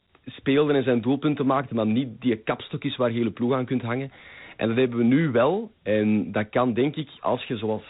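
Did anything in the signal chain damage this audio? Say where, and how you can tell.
Yes. Throughout the speech, a gritty, grainy hiss rides along with the talking and nothing is heard above about 3.8 kHz, so the sound is dull and phone-like. The damage is at the codec stage, in Dialogic VOX ADPCM, the Oki-style format of phone menus and voicemail. It stores each sample as a 4-bit step from a predicted value, and the coarse steps leave that rough noise on the signal. The narrow band fits a rate of 8,000 samples a second, about 32 kbps.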